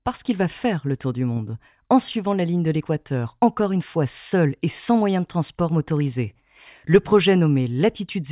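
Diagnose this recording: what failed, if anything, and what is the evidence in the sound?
Nothing failed; no fault is audible anywhere in it.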